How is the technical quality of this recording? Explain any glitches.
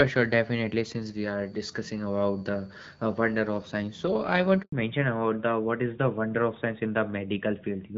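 The recording has two linked faults, both near the middle of the speech: a dropout followed by a permanent loss of bandwidth.

At 4.62 s a handover gap occurs. The call is passed from one network link to another, and for about 100 ms no speech frames arrive. The voice cuts away almost at once, leaving a brief hole of silence that ends at 4.72 s. Anything spoken inside that tenth of a second is simply missing.

From 4.72 s to the end, the call shows a fallback to narrowband. After the switch the new link no longer carries HD Voice, and the wideband codec is replaced by an older narrowband one, consistent with a move from AMR-WB at 12.65 kbit/s to AMR-NB at 12.2 kbit/s. Nothing above 4 kHz survives. The voice turns duller and boxier than in the first half, where the wideband codec carried it with only light coding damage.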